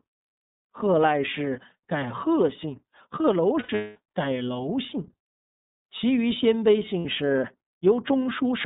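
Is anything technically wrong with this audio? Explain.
Yes. The speech has two problems: plainly audible narrowband coding throughout, and two dropouts patched over by the decoder.

The iLBC codec affects the whole clip. The band runs only from about 150 Hz to 3.7 kHz, so the speech sounds thin and muffled. iLBC codes each frame's excitation on its own, with no help from the frame before. The damage is plainly audible as a slightly rough, synthetic quality to the voice. That fits the 30 ms mode at 13.33 kbps.

Lost iLBC frames occur first from 3.6 to 3.97 s. About 300 ms of audio is missing, scattered across 360 ms, with the longest gap around a fifth of a second. That points to roughly ten lost 30 ms frames. The decoder fills each hole by repeating the last pitch cycle mixed with noise, fading as the loss runs on. It sounds like a held, buzzy, breathy vowel.

A second loss runs from 6.99 to 7.06 s and lasts 60 ms, which fits two frames. 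It is a brief buzzy smear. Because every iLBC frame stands alone, the speech comes back cleanly straight after both gaps.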